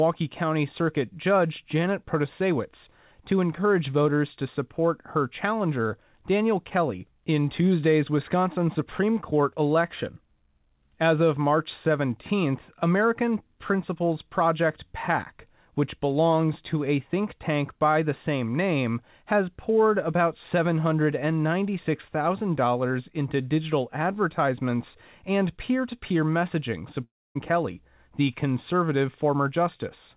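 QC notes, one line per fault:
27.04–27.38 s, long network dropout: just after "peer to peer messaging" the sound smears into a fading buzz, then goes quiet for about 270 ms before resuming with roughly 320 ms lost, likely from stalled network delivery. Unlike a brief packet-loss click, the concealment gives out into silence.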